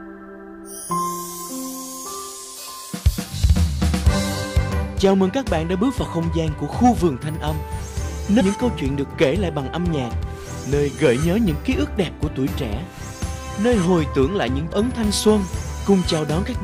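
Compressed frames skipped at 4.70 s, 8.39 to 8.41 s, 10.21 s and 14.72 s: missing or rejected frames make the audio jump ahead a tenth to a fifth of a second, each join visible as a vertical seam on the spectrogram.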